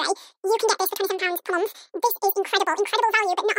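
From the first moment to the end, the speech plays at twice its proper speed and a full octave, 12 semitones, too high. This is audio read two samples at a time (double speed). The playback side treated each pair of samples as a single frame, as if the stream had two channels or wider samples. So time is compressed by half.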